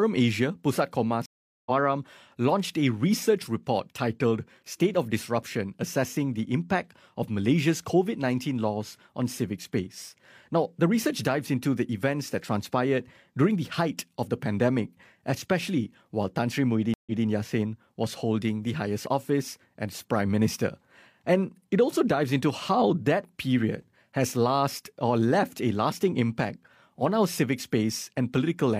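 A stream reconnect occurs at 1.26 to 1.71 s: the connection dropped and a fresh decoder restarted mid-stream, leaving 402 ms of silence before the speech resumes roughly a third of a second further on. A second reconnect at 16.94 to 17.25 s gives a 126 ms gap, and the audio restarts 186 ms earlier, repeating a short stretch.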